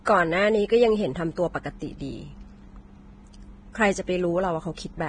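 Throughout the speech, the treble sounds grainy and hissy, sibilants turn to rough noise, and attacks are blurred, most likely from heavy Vorbis compression at a low bitrate near 22 kbps. A spectrogram shows a sharp ceiling at 9.7 kHz, with mottled, noise-like texture beneath it.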